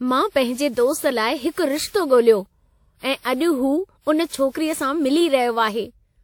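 From start to finish the speech carries generation loss, most likely from being decoded and re-encoded around seven times with a lossy codec whose character fits WMA 1 at 96 kbit/s. Each pass quantised the signal again on a shifted frame grid, so the errors stacked up. The result sounds swirly and hollow, with smeared consonant attacks and more spectral gaps than a single encode at that rate would leave, though content still reaches up to 20 kHz.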